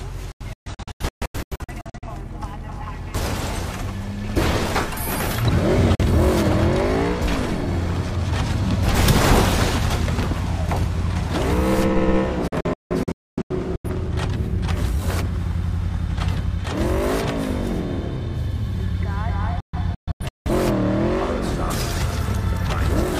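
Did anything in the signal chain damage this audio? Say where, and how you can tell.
Yes. Digital broadcast dropout at the reception stage, at 0.32–2.08 s, 5.95–6.04 s, 12.48–13.90 s and 19.60–20.51 s. The sound mutes abruptly, with 3 ms fades, in clusters of holes up to 256 ms long. The receiver silenced corrupted frames of about 43 ms each, and their content is gone.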